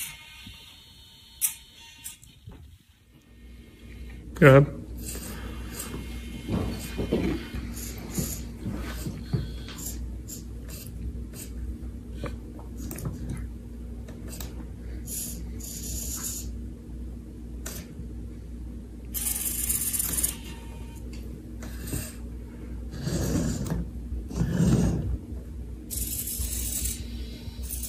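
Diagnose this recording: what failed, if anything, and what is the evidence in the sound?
Nothing failed here: I listened for trouble at every stage of the chain and didn't hear any, so there's no evidence to point to and nothing to fix.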